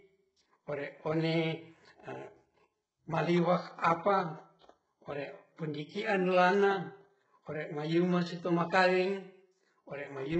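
Speech, with heavy HE-AAC compression throughout: treble rebuilt from lower bands sounds gritty and lispy on sibilants, nothing above 8 kHz, likely from a very low bitrate around 8 kbps.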